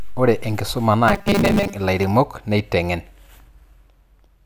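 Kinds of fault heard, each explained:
Robotic sound from repeated short buffers: Between 1.08 and 1.74 s the speech turns into a rigid metallic buzz at 200 Hz. This is likely a 5 ms stretch replayed while new audio arrives late. Most of that span is repeats.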